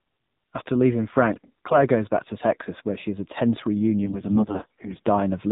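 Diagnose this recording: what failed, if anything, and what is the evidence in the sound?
The codec stage failed. It is an AMR narrowband mobile codec throughout. Nothing above 4 kHz survives, and the speech sounds plainly buzzy and synthetic. That fits a low-rate 7.4 kbps mode, where a few pulses drive a vocal-tract model in each frame.

The network link shows AMR bit errors from 1.32 to 1.77 s, just before "goes back to". They return from 4.06 to 5.07 s, right after "she has a tense". Pitch and level hold, but the speech turns hoarse, scratchy and gargly. Less protected bits arrived flipped, at roughly 7 to 10 percent. The pulse positions and fine spectral values decode wrong.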